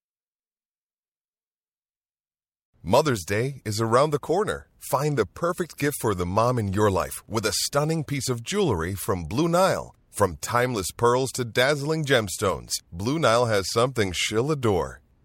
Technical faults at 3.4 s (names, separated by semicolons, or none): none